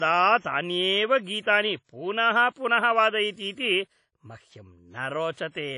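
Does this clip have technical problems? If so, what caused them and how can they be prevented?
Yes. Throughout the speech there is WMA compression damage, most likely from a low-bitrate Windows Media Audio encode. The long transform blocks scatter quantisation noise across tens of milliseconds, and weak spectral lines get discarded, consistent with an encode around 32 kbps. The result is plainly audible: a ringing, washy texture, a hiss that swells and fades with the voice, and nothing at all above 10.1 kHz, which leaves the sound dull. To prevent it, record and deliver in a lossless format, or use a modern codec at a generous bitrate.

From 1.84 to 1.89 s, between "तान्येव गीतानि" and "पुनः पुनः", there is pre-echo. A sharp onset landed late in a transform block, and the encoder spread the block's quantisation noise evenly across it. Noise sized for the loud attack therefore also filled the near-silent stretch before it. 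You hear about 52 ms of hiss leading into the onset, and the attack itself sounds softened and smeared. To prevent it, use an encoder with block switching to short windows at transients, and give it enough bitrate.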